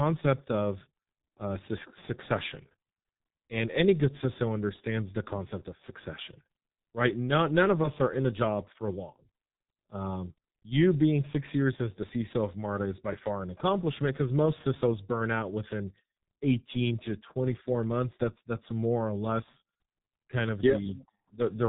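Speech runs through the G.723.1 codec for the whole clip, with heavy damage. Nothing above about 3.8 kHz survives, so the sound is muffled, and the coarse 30 ms frames with a slowly updated voice model make it hoarse and smear consonants together, which fits a rate near 6.3 kbit/s. A plain low-pass filter would muffle the sound just as much but leave consonants crisp and the tone clean, without this hoarseness.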